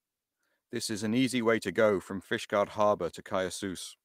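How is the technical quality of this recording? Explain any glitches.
No glitches can be heard anywhere in this recording.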